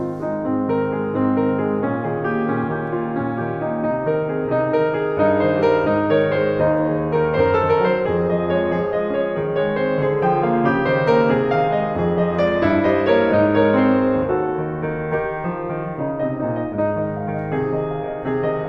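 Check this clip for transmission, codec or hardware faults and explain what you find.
One fault is present: clock slip clicks run from 0.65 to 18.49 s. Faint ticks recur about every half second through the music, likely from two unsynchronised clocks drifting roughly 40 ppm apart, each slip dropping or repeating one sample. Their steady spacing sets them apart from irregular dropout clicks.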